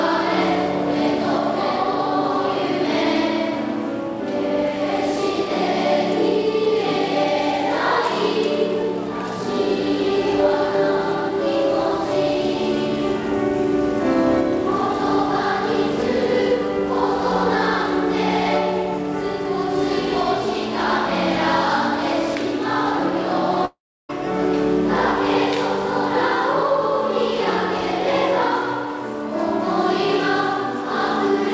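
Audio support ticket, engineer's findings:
Long network dropout, 23.65–24.11 s. Sound cuts out and the receiver stretches the last audio into a fading buzz or hiss, then about 0.33 s of near-silence. Audio resumes with roughly 0.44 s lost. Likely packet loss upstream of the jitter buffer. G.722 band limit at 8 kHz present throughout.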